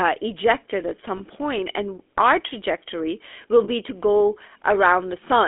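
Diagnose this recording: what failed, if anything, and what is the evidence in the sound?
The codec stage failed here: the speech was carried through the GSM full-rate codec, and its damage is plainly audible for the whole clip. The coder rebuilds the speech from a vocal-tract model driven by a coarse, regularly spaced pulse excitation, which leaves a buzzy, gravelly roughness on every stretch of speech. The line band runs from about 300 Hz to 3.5 kHz, so the sound is thin and narrow, which fits the 13 kbps full-rate coder.

The network or radio path also dropped lost GSM frames twice, and the decoder concealed each gap by repeating the last good frame's settings. The first is at 1.18 to 1.22 s, after "ejected at" and before "point and our trajectory", which fits a single 20 ms frame. The second is at 3.64 to 3.69 s, after "and our trajectory will" and before "to go", which fits two frames. 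Each gap is heard as a brief, rough metallic ring held over the sound.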